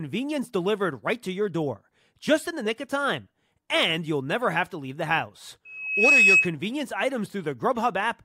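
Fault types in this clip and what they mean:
Loudspeaker feedback squeal: the microphone is re-capturing the loudspeaker it drives, and at one frequency the round-trip gain exceeds unity, so that frequency reinforces itself. Right after "to leave the house", at 5.65 s, a steady 2.6 kHz tone swells over under half a second to roughly 10 dB above the speech, then persists until 6.54 s, when the loop is broken or the gain drops.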